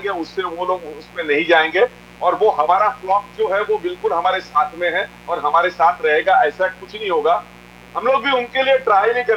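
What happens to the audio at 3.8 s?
At 3.8 s you're hearing mains buzz, though it isn't specific to that moment; it runs through the whole clip. Switching spikes on a 60 Hz supply leak in twice per cycle, stacking harmonics into the kilohertz range, so there's a steady raspy buzz sitting around 25 dB under the audio.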